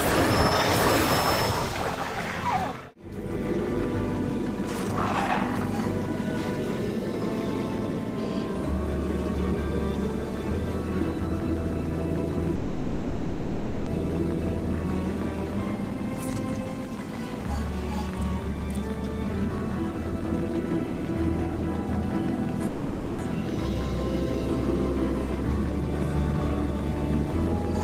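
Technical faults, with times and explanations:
12.55–13.89 s, call audio freeze: the sound stalls into a fading buzz or hiss for about 1.3 s, then resumes where it stopped, likely packets held up and the jitter buffer running dry.
22.67–23.22 s, call audio freeze: the same pattern, a fill of about 0.5 s that pushes everything after it later, with nothing actually lost once the audio resumes.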